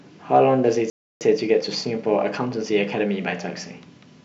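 At 0.9 s the speech cuts out in mid-flow. Silence lasts about 0.31 s, until 1.21 s. This is a playback stall. The player likely ran short of data or had its thread blocked. The speech then resumes where it stopped.

From 1.21 s to 3.25 s there is time-compressed catch-up. The player trims its backlog by removing small slices and cross-fading the joins. Speech runs about 1.15 times faster. Pitch stays normal.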